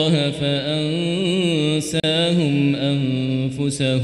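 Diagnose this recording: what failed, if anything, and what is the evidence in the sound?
A gap at a join of encoded pieces opens at 2.00 s: the continuous sound drops out for 36 ms and then resumes exactly where it left off. The stage is the codec, at the point where separately encoded pieces were concatenated. Each encoder run inserts start-up delay and pads its final frame, and neither was trimmed, so that padding plays back as a short hole. Its edges are smeared by the codec.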